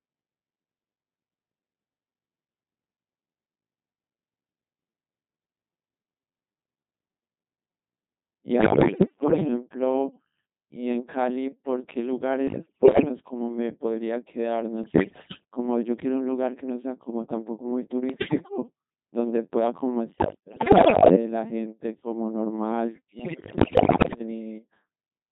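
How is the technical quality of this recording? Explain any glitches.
Poor: the speech has been through a very low-rate vocoder for its whole length, and six bursts of transmission errors break it up further.

Codec 2 vocoder, throughout: the encoder keeps only pitch, voicing, energy and a coarse spectral envelope, then the decoder rebuilds the voice from sine waves, so the original waveform is gone. The heavy damage heard here fits a rate of about 2.4 kbit/s. Every syllable comes out robotic and buzzy, with a synthetic timbre.

Bit errors on digital voice radio, at 8.58–9.48 s, 12.48–13.09 s, 14.84–15.41 s, 18.10–18.58 s, 20.10–21.16 s and 23.20–24.20 s: corrupted bits reached the decoder, and each bit steers the pitch, level, voicing or spectrum of an entire frame. The damage sounds like error rates from several percent up to around one bit in seven, worst in the last two bursts. The synthetic voice lurches in pitch and loudness, shifts tone colour, and dissolves into bleeps, warbles and robotic gibberish.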